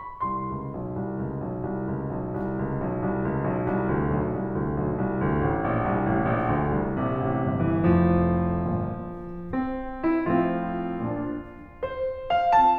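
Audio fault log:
Nothing to log here, as the music runs along with no faults turning up anywhere in it.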